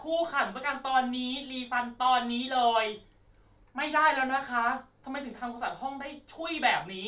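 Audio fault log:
No fault is heard in this speech clip.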